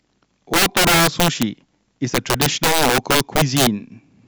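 Integer overflow runs throughout the speech, with gain pushed about 12 dB too hot, so about 7 percent of samples exceed the integer limit and wrap to the opposite sign. Loud syllables crack violently. The waveform shows peaks abruptly flipping to the opposite sign, and the spectrogram shows broadband vertical streaks.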